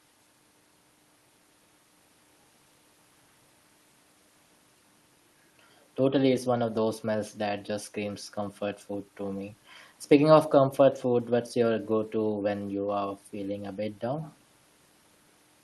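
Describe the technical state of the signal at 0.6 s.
At 0.6 s the speech comes through intact, with no dropout, glitch or other fault, only the ordinary coding character of the Opus call path, whose band limit sits around 12 kHz.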